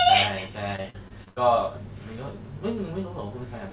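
Choppy, robotic-sounding speech between 0.76 and 1.38 s, heard over a narrowband call path with nothing above 4 kHz, which points to G.711. This is repeated packet loss: six gaps, the longest 78 ms, were patched by stretching the preceding sound, concealing about a third of that span.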